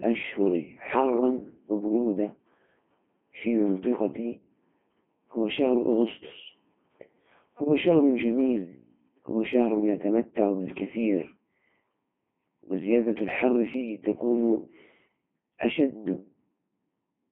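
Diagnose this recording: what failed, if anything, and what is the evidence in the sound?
Throughout the recording the speech sounds robotic and buzzy, with a hollow, synthetic quality and a band held to roughly 150 Hz to 3.4 kHz, and the damage is heavy. That points to the codec stage: a Codec 2 vocoder, at a rate which fits its 2.4 kbit/s mode. It discards the waveform, sending only pitch, voicing, energy and a coarse spectral envelope. The decoder then rebuilds the voice from sine waves.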